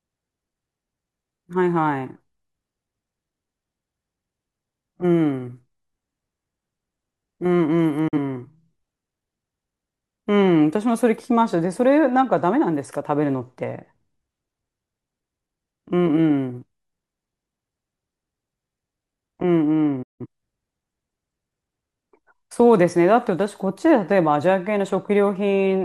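At 8.08 s the speech snaps to silence within about 8 ms and returns at 8.18 s. A longer hole follows from 20.02 to 20.26 s. Both are digital broadcast dropouts. The receiver stopped getting usable frames and muted until good ones arrived. The first gap removed about 43 ms of programme, which fits a single lost frame. The second removed about 171 ms, consistent with roughly four consecutive frames. Nothing sent during either gap can be heard.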